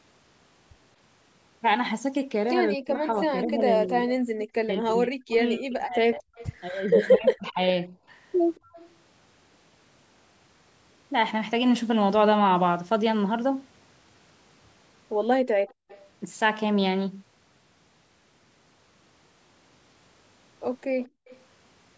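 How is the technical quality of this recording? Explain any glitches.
The recording has three kinds of echo-canceller trouble, typical of a speakerphone call. The band stops at 8 kHz, as you'd expect from call microphone processing.

From 2.77 to 7.93 s there's speech suppressed in double talk. The talker keeps dipping, dulling or breaking into pieces, about three seconds of it in total, with the deepest drops around 40 dB. The likely cause is both ends talking at once: the canceller couldn't tell this voice from the loudspeaker echo, so it pulled everything down.

Echo leak shows up five times: 4.40 to 4.45, 6.35 to 6.52, 8.55 to 8.89, 15.68 to 16.10 and 21.0 to 21.4 s. Each is a faint copy of the voice trailing 226 ms behind, roughly 20 to 25 dB under the speech. It's likely a far-end loudspeaker bleeding into that side's microphone, with the canceller missing part of it and sending the leftover back down the line.

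Background gated by the echo canceller hits at 15.53 to 15.88 s and again at 21.08 to 21.27 s. The room tone suddenly sinks, by about 36 and 37 dB, for a few tenths of a second, then comes back. That's the canceller clamping the microphone hard while the loudspeaker plays, then releasing. Both gates land right on top of echo leaks.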